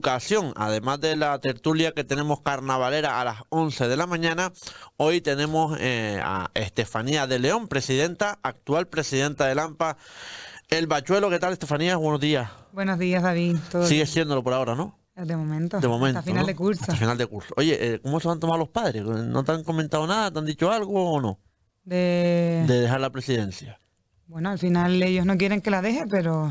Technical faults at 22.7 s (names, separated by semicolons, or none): resampler restarted on every block